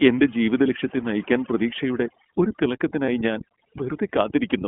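Overdone noise removal runs through the whole speech clip. The noise reducer was set too aggressively, so any frequency band sitting near its noise estimate is pushed far down or switched off, and the quieter parts of the voice are removed with the noise. The background between phrases falls to near silence scattered with small twinkling specks, while the voice itself loses the softer detail that should surround each sound.

The iLBC codec also shapes the entire clip. Its frame-by-frame coding at 20 ms intervals is consistent with the 15.2 kbps mode. The audible band is held to roughly 200 Hz to 3.4 kHz, so nothing above the narrowband ceiling survives. Each frame's excitation is coded independently, which leaves the speech intelligible but plainly rough and synthetic. That coarse, synthetic texture compounds with the noise-removal damage.

Lost iLBC frames appear at 3.06 to 3.09 s, right after "ജീവിതലക്ഷ്യത്തെ നയിക്കാൻ പ്രതീക്ഷയുടെ ഒരു". 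The gap is about 20 ms long, which points to a single dropped frame. The decoder filled it by repeating the last pitch cycle blended with noise, so the moment sounds like a briefly held, slightly buzzy vowel. Because iLBC frames stand alone, the voice recovers cleanly almost immediately afterward.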